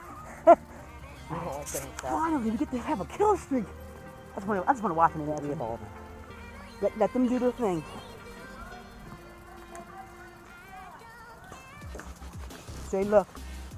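Nothing stood out as a technical fault on listening.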